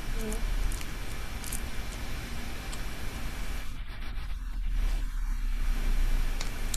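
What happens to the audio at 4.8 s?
Nothing goes wrong at 4.8 s; the audio is intact at that moment, with no dropout, click or distortion.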